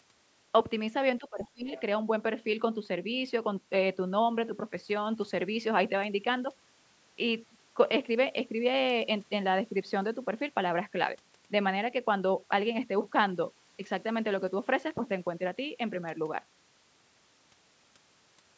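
From 1.19 to 1.7 s, the speech dips sharply, by roughly 25 dB, in speech suppressed in double talk. Both sides likely talked at once, so the echo canceller turned the talker down. The other side's voice leaks through twice, from 1.39 to 1.48 s and from 1.7 to 1.82 s. These are faint scraps, well below the speech, likely echo the canceller missed.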